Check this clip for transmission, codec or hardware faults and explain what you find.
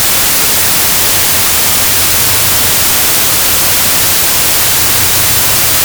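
A wrong sample width fault runs through the whole clip. Packed 24-bit data are being read as 16-bit, so mismatched bytes form loud noise, with the original buried beneath, slowed to 0.667 speed and lower in pitch.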